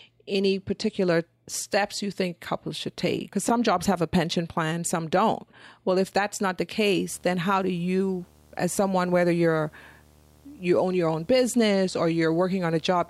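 From 7.14 s, right after "if that's not the", a video or display buzz sits under the speech until the clip ends at 13.10 s. A screen or video cable is coupling its field-rate signal into the audio, giving a steady 75 Hz buzz with a harsh hash above it, roughly 30 dB below the speech. On a spectrogram this shows as a stack of horizontal lines at 75 Hz and its harmonics, continuing through pauses. The waveform shows a constant low-level ripple there.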